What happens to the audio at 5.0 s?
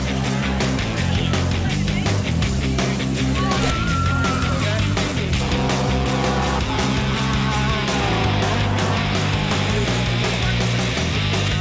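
Nothing goes wrong at 5.0 s: the audio runs on intact through that moment, with no dropout, glitch or distortion.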